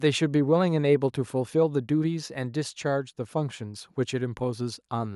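No technical faults are audible in this speech recording at any point.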